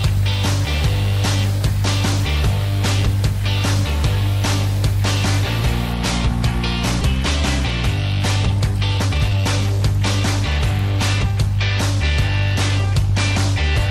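At about 7.01 to 7.03 s there's a skip ahead: roughly a second of audio just vanishes and playback jumps straight to later material with no fill. That points to a chunk dropped in transit or thrown out by an overflowing jitter buffer while later audio was already queued. Later, there are two bursts of jitter buffer speed-up as the receiver trims tiny pitch-period slices to drain excess delay. From 8.98 to 9.79 s the sound runs at 147% speed with no pitch shift and about 0.4 s cut, so it feels rushed. From 10.59 to 11.33 s it's a gentler 105%, with only around 50 ms removed.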